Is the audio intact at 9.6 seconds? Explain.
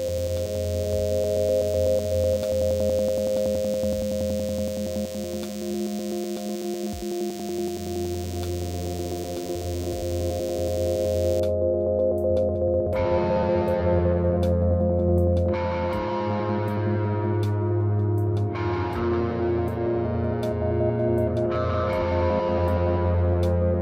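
No. At 9.6 seconds the audio carries DECT cordless phone buzz, which runs from the start to about 11.40 s. A nearby DECT handset or base station transmits a brief radio burst every 10 ms, and the audio circuitry rectifies it into a thin, steady buzz at 100 Hz, sitting roughly 20 dB below the signal. On a spectrogram it shows as evenly spaced horizontal lines at 100 Hz and its many harmonics. The waveform carries a regular 10 ms pulse pattern.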